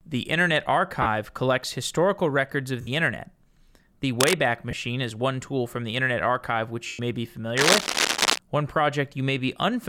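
Right at 1.02 to 1.07 s, just before "collects historical records of", there's a 40 ms patch of lost LE Audio frames. The LC3 decoder papers over the gap by replaying the last spectrum with scrambled signs, so the speech goes briefly smeary and noisy. It happens again at 2.81 to 2.88 s, right after "collects historical records of", for 60 ms.

At 4.20 to 4.39 s a burst of scratchy, rustling noise sits over the speech at roughly the same level. That's likely cable scratch noise from a worn cable or connector shifting, its contact resistance flickering.

More lost frames follow at 4.71 to 4.73 s, a short 20 ms blip just before "is one tool from". The longest dropout is at 6.87 to 7.00 s, where 120 ms is concealed. At that length the smeared fill starts fading toward silence, which fits roughly a dozen 10 ms frames going missing.

From 7.57 to 8.39 s there's a second, longer stretch of the same scratching, a bit louder than the speech itself.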